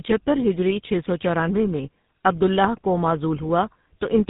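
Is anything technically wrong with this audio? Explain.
Yes. Tandem speech coding runs throughout: the speech sounds as though it was decoded and re-encoded at each network hop, with one low-rate coder working on the previous one's damage. It fits two GSM full rate passes bridged by G.711. Nothing reaches above 3.8 kHz, and the speech comes out rough, muffled and warbly.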